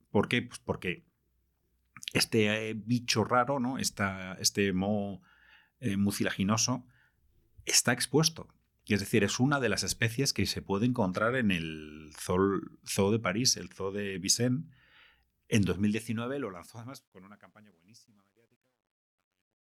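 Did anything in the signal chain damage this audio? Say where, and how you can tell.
Yes. Truncation distortion on a fade appears in the sample-format or gain stage. From 15.68 s to the end the tail turns grainy. It is worst from 17.23 s to 19.79 s. The fade stage kept too few bits and added no dither. At low levels the waveform collapses into coarse steps. The grit fits roughly 11-bit resolution.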